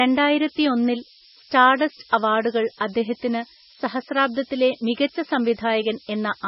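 Low bit depth with noise shaping runs from start to finish: the speech is held to about 5 bits, and the rounding error is pushed toward high frequencies, leaving a steady, thin hiss that climbs sharply in the treble and sits nearly as loud as the speech itself.

MP3 compression, likely the cause of the second fault, also runs throughout: nothing remains above 5.6 kHz, and the speech sounds heavily watery and swirly, with weak detail flickering in and out and smeared onsets, all pointing to a very low bitrate of around 17 kbps.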